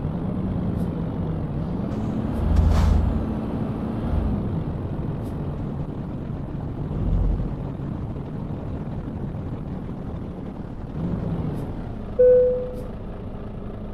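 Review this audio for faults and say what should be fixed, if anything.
A call bitrate drop runs from 5.59 to 11.35 s. The bandwidth estimate fell and the encoder went from 128 to 14 kbps, coding coarsely and discarding high frequencies, so the audio turns rough, watery or muffled until the rate recovers at 11.35 s. A spectrogram shows the upper band disappearing across that span. To prevent it, give the call a more stable network path, or set a higher minimum encoder bitrate so the bandwidth estimator cannot push Opus this low.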